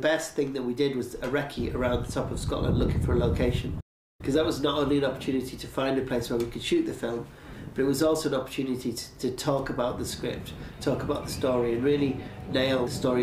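At about 3.80 s the audio just cuts out in mid-flow and stays silent until 4.21 s, a gap of roughly 390 ms. That's a playback stall: the player most likely ran short of data or had its thread held up, so nothing reached the output until it caught up.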